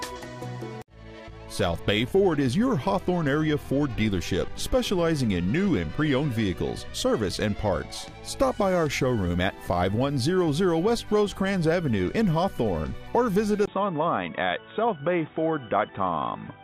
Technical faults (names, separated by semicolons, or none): input switched to a poorer device